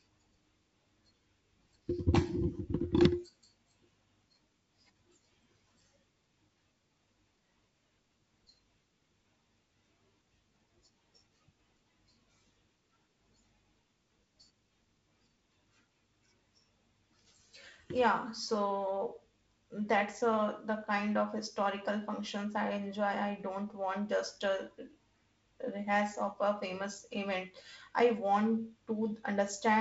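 No technical faults heard.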